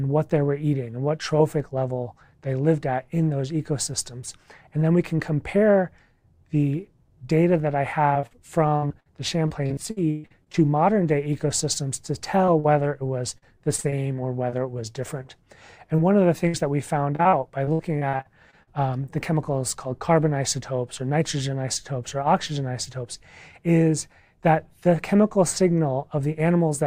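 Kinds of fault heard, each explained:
repeated packet loss (robotic sound): choppy stretches at 8.1–10.6 s, 13.4–15.0 s and 17.2–18.7 s, as lost packets were repeatedly patched by continuing the last sound.
short concealed packet loss: brief smears at 12.46 s and 12.60 s, where 20 and 40 ms never arrived and were filled by extending the preceding sound.
burst of packet loss: a held, fading tail at 16.48 s, where about 60 ms went missing in one run and the receiver stretched the last sound before resuming.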